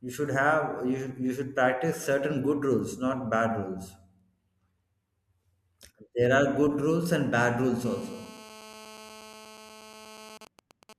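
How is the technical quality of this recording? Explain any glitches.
The recording is marred by mobile-phone interference near the end, first a continuous buzz and then an intermittent burst pattern.

From 7.85 to 10.38 s, right after "rules and bad rules", a GSM phone buzz sits about 20 dB below the speech. A nearby phone in a call pulses at 217 Hz, and the audio circuit rectifies it into a harsh rasp. A spectrogram shows evenly spaced harmonic lines, and the waveform shows regular spikes.

From 10.41 to 10.93 s, GSM signalling bursts appear at roughly 20 dB below the speech. The phone's transmitter falls back to brief groups of 217 Hz pulses while its user is silent, giving even ticks with a longer buzz twice a second. These show as clustered vertical stripes on a spectrogram.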